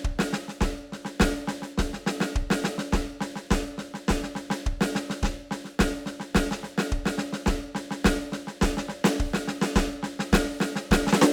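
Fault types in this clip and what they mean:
No faults are audible anywhere in this music.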